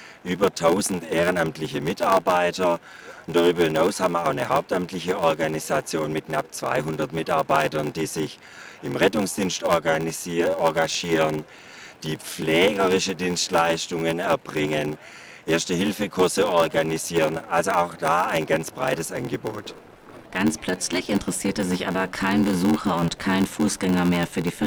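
Throughout, a block size mismatch (padded) leaves a zero gap in every block, giving a steady 86.1 Hz buzz, consistent with 512-sample reads. The audio runs at 0.861 times normal speed yet keeps its timbre, unlike a sample-rate error.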